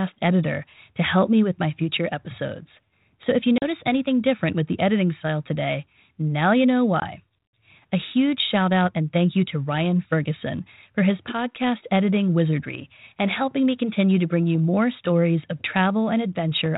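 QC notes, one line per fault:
3.58–3.64 s: packet loss on an ADPCM call. A hard-edged 40 ms hole, consistent with about two packets, opens between "if you" and "anything different with the". Speech resumes with brief roughness, because the decoder's adaptive predictor and step size lost track of the sender's during the gap. That distorted recovery, settling over some tens of milliseconds, separates it from a clean dropout.
7.00–7.03 s: packet loss on an ADPCM call. A shorter 20 ms silence, consistent with a single packet, falls just after "today now you know". The same short-lived distortion follows while the G.726 decoder's step size re-converges. That transient differs from the 32 kbit/s codec's 4 kHz band limit heard across the clip.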